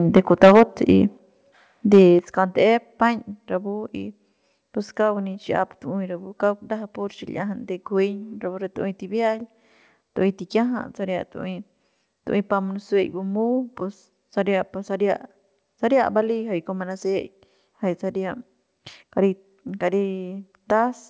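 From 0.16 to 0.63 s the speech has a harsh, crackling edge, most likely microphone overload: peaks about 10 dB past the converter's limit, with roughly a tenth of samples flattened. On the waveform the loud cycles show squared-off tops; the spectrogram shows smeared broadband energy above each syllable, up to the 8 kHz ceiling of the call path, which fits a G.722 codec.

At 0.17 s the level drops by about 2 dB in one step, likely the microphone volume being stepped down by the call software. It steps down again at 1.17 s by about 6 dB. The waveform envelope narrows abruptly at each point, and the background noise floor in the spectrogram darkens along with the speech.

A brief overload returns at 1.93 to 2.02 s, about 3 dB over, again with flat-topped peaks and a short burst of crackle, likely the input still running hot. At 2.19 s the level falls once more by about 7 dB, the largest microphone volume step. 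From there the waveform sits visibly lower, with no clipped peaks.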